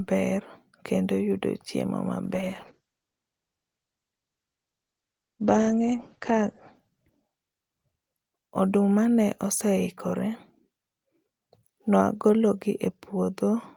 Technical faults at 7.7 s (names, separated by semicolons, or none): call bitrate drop